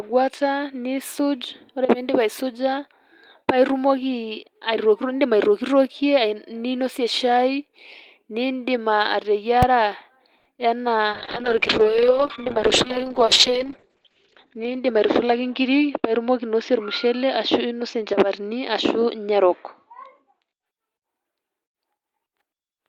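At 9.63 s there is a single loud bang. This is invalid numbers at full scale. A short block, which fits a 128-sample block, was pinned at maximum level.

From 10.37 to 10.47 s, the sound is held about 80 ms too long. This is a short stall from a late packet. The receiver stretched the last audio, then resumed with nothing lost.

From 10.57 to 10.60 s, there is a brief smear. This is short concealed packet loss. About 20 ms never arrived in time, and the gap was patched by extending the preceding sound.

From 11.09 to 20.72 s, the speech turns muffled and rough. This is a call bitrate drop. The bitrate fell from 32 to 7 kbps, and the bandwidth narrowed from 20 kHz to 8 kHz. It stayed at its lowest for 2.79 s.

From 14.57 to 15.32 s, the speech sounds hurried at an unchanged pitch. This is a jitter buffer speed-up. Playback ran at 108%, trimming roughly 70 ms in small pitch-period pieces.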